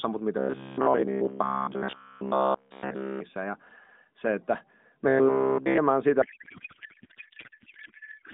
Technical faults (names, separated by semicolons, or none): robotic sound from repeated short buffers; codec payload misread